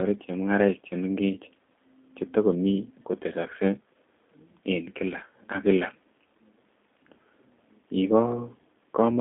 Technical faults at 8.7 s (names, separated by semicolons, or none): G.729 codec